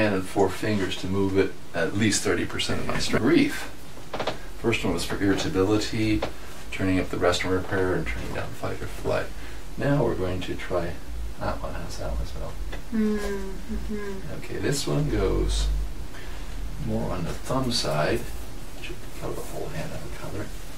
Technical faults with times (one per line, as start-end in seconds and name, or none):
none